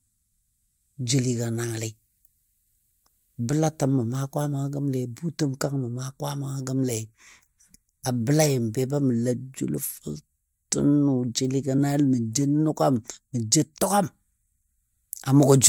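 At 11.77 s, compressed frames skipped: about two 23.2 ms frames are lost, so speech jumps ahead, a smeared blip showing as a spectrogram seam.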